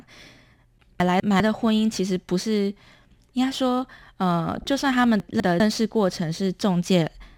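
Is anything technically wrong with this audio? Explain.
Yes, there are two kinds of fault.

Chunks out of order occur at 1.0–1.4 s and again at 5.2–5.6 s. Within each span, one 200 ms chunk of the speech plays one chunk late, after the chunk that should follow it. Nothing is missing, which sets it apart from a dropout. The speech briefly sounds jumbled.

DAB burbling occurs at 4.57–4.64 s. This short span fits about three damaged MP2 frames. A small rate of uncorrected bit errors corrupts sample values, putting short blips of noise in single sub-bands. The result is a few watery blips over the speech rather than silence or reordered audio.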